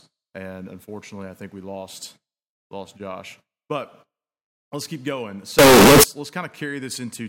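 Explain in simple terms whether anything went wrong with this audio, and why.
Something did go wrong. Right after "let's keep going", from about 5.59 to 6.04 s, the speech turns into a blaring, harsh buzz with background noise as loud as the talking. That's a float read as integer fault, likely caused by 32-bit float audio being read as 32-bit integers.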